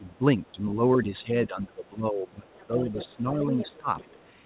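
From 0.0 to 3.88 s the talker's level keeps sinking and recovering. About two seconds in total are affected, with the deepest dip near 15 dB. This is speech suppressed in double talk. The echo canceller likely mistook overlapping talk for echo and turned everything down.

A second voice leaks through in three places. From 0.08 to 0.52 s it is barely audible, about 40 dB under the talker. From 2.49 to 3.07 s and 3.44 to 4.24 s it is much clearer, about 15 dB down. This is the other side's voice leaking through. Residual loudspeaker echo likely escaped cancellation.

Throughout, nothing reaches above 4 kHz, which fits a narrowband call path.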